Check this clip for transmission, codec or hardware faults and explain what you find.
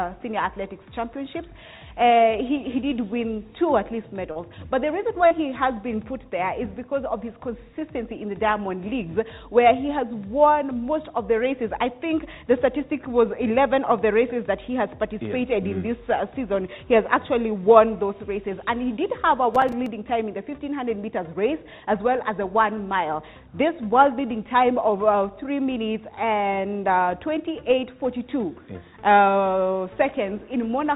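Three faults stand out: two short concealed packet losses and one burst of processor overload crackle, all heard through a call path that cuts everything above 4 kHz, as a narrowband G.711 mu-law link would.

At 4.32 s and again at 5.27 s, short concealed packet loss occurs. About 40 ms of audio failed to arrive in time each time. The receiver bridged the first 32 ms by extending the preceding sound, then faded back in. The result is a brief smear or wobble lasting about 60 ms.

From 19.55 s to 19.87 s, processor overload crackle occurs. The processor repeatedly missed its deadlines on audio buffers that sound to be around 3 ms long. Several missed buffers were replaced with silence. Those tiny hard-edged dropouts add up to a gritty crackle that sits on top of the sound for about a third of a second.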